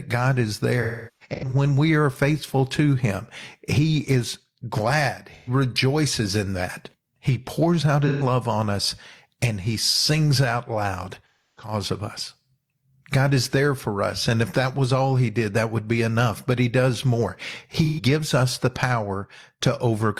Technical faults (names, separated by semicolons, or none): AAC frame loss with concealment